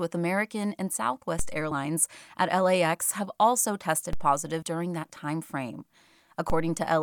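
At 1.39 s a DC step shifts the waveform's zero line abruptly, producing a low thump while the speech carries on. On the waveform the whole trace jumps off centre and then drifts back, decaying as a roughly 2 Hz high-pass would pull it. The spectrogram shows only a brief smudge at the very bottom. At 1.71 s compressed frames are skipped: about one frame, roughly 30 ms of audio, is dropped, which fits a 32 ms frame. The speech jumps forward, and the spectrogram shows a thin vertical discontinuity where the harmonics break. The same DC step thump and slow recentring recur at 4.13 s. At 4.62 s about two frames, around 70 ms, go missing. At 5.81 s roughly one more frame, about 30 ms, is lost. A final DC step lands at 6.50 s.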